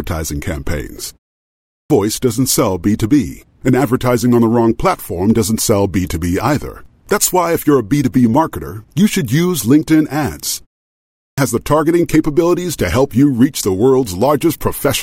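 At 1.42 s the speech resumes with its opening cut away. This is a clipped start after a pause. About 480 ms is lost, up to 1.90 s. The pause before it lasts 0.32 s. In that gap the output device went idle, and it needed time to wake before passing sound again. The same happens at 10.90 s, after another 0.32 s pause. About 477 ms disappears, up to 11.38 s. Each time, the speech jumps in abruptly, mid-flow.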